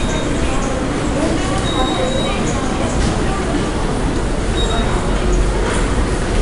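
From start to finish the audio carries 4-bit ADPCM compression: coarse predicted steps leave a gritty hiss riding on each loud moment and smearing attacks, unlike fixed-level quantisation noise. Nothing sounds above 10.6 kHz, which fits an ADPCM stream near 89 kbps.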